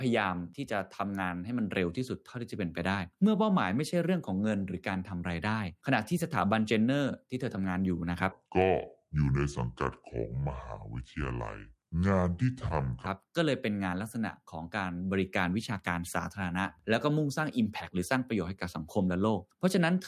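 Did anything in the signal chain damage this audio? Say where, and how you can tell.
Yes: from 8.32 to 13.06 s the speech drops about seven semitones and slows to two-thirds speed, a wrong sample rate at playback. Pitch and tempo shifting together, unlike pitch-only processing, fits 48 kHz audio played at 32 kHz.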